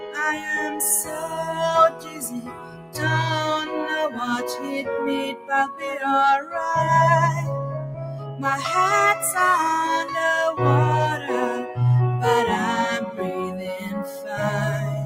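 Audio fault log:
throughout: noise suppressor applied to music or sounds. A speech-tuned suppressor treats steady material as noise, so level swings by about 10 dB and the sound pumps and thins.
0.00–0.18 s, 1.03–1.53 s, 1.90–3.01 s, 4.39–4.71 s, 5.33–5.50 s, 8.19–8.42 s, 14.05–14.33 s: sound cut by the noise suppressor. Sustained passages sink by about 6 to 15 dB, deepest at 1.90–3.01 s, as the suppressor mistakes them for noise.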